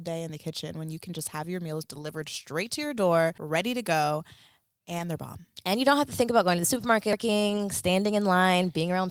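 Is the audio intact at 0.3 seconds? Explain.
Yes, the speech at 0.3 seconds plays through cleanly, with no dropout, click, distortion or other break at that point.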